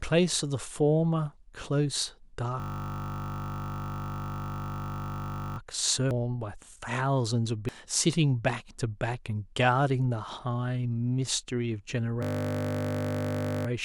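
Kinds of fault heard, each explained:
System hang loop: the computer stalled while the sound hardware kept replaying one 20 ms buffer, giving a steady 50 Hz buzz from 2.6 to 5.58 s and 12.23 to 13.67 s.
Damaged data in a compressed stream: corrupted frames made the decoder lose sync and hunt for the next header, producing brief chirps or blips at 6.11 s and 7.69 s.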